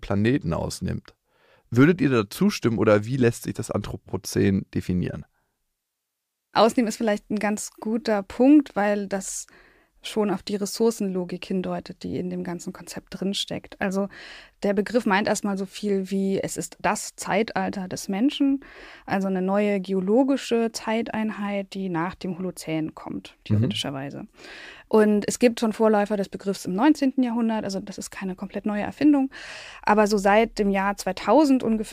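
No technical faults can be heard at any point in the recording.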